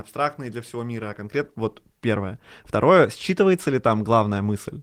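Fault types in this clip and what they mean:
No faults are audible in this speech recording.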